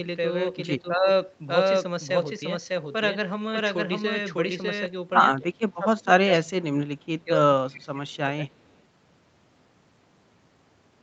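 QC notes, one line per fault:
0.82–1.08 s, 5.39–6.89 s, 7.24–8.21 s and 8.37–8.52 s, speech suppressed in double talk: the echo canceller likely mistook the near talker for loudspeaker echo while both sides spoke at once, and attenuated everything. The speech dips by about 10 dB in the first instance, then by about 20 to 25 dB in the later ones. The longest run, around 5.4 to 6.9 s, loses roughly a second of level in broken stretches. The signal stays band-limited to 8 kHz by the Opus call path throughout.
6.36–6.40 s and 7.73–7.82 s, echo leak: on a loudspeaker end the canceller likely failed to remove all of what its microphone picked up, so part of the far signal returned. It appears as short, faint scraps of a delayed copy, 237 ms behind the original, at about 25 dB below the speech. Both scraps fall inside the suppression runs, so they surface as brief ghostly fragments during the dips.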